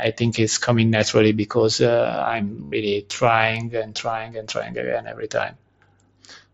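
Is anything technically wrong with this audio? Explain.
Yes, there's one fault. From 2.64 to 2.72 s there's a burst of concealed Bluetooth headset packet loss, about 82 ms. The receiver kept looping the best-matching recent waveform stretch, so you hear a held buzzy tone, then a slight warble as real sound resumes, which fits a run of around eleven lost frames. The mSBC link carries it, light grain and all.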